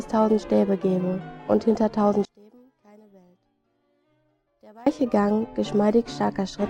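Between 2.25 and 4.86 s the audio drops by about 31 dB to a faint residue, likely from one channel inverted, so the shared content cancels.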